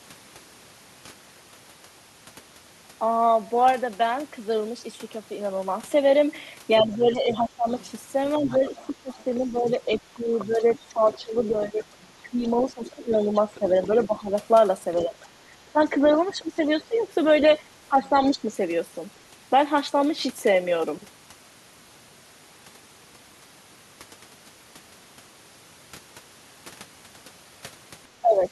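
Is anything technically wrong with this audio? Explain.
Yes. From 6.78 to 17.05 s, the other side's voice leaks through, around 20 dB below the talker. Leftover loudspeaker echo the canceller likely missed is the cause.

Speech is suppressed in double talk from 6.82 to 18.44 s and again from 28.21 to 28.48 s. The talker's level dips by up to roughly 15 dB, for about five seconds in all in the first stretch. The echo canceller likely ducked both voices at once.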